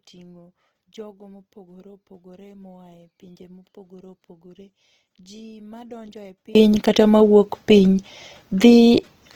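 From the start to 6.55 s, the speech almost disappears in mono, falling about 27 dB to a faint trace, likely one channel inverted cancelling the shared centre.

Throughout, the speech sounds rough and grainy, its tones turned noisy, likely Opus compression in music mode filling starved bands, consistent with a bitrate around 16 kbps.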